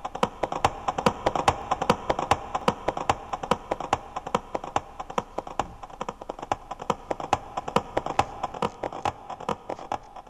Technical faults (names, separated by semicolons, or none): dropped samples; audio missing between chunks; channel delay (comb filtering)